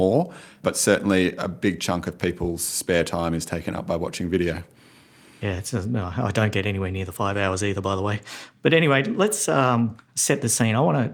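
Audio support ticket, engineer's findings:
No faults found on listening; no dropouts, glitches or level problems in the speech, nothing to escalate.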